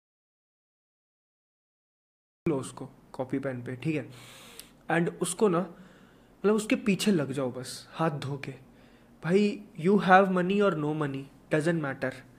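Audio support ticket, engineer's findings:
Audio dropout to silence, 0.00 to 2.46 s. Clip opens already dead: silence, no room tone, no noise floor. Input likely lost upstream, from a disconnected device, failed link or stray mute, while the recorder kept writing samples. Content in that window unrecoverable. Signal resumes abruptly at 2.46 s, mid-flow.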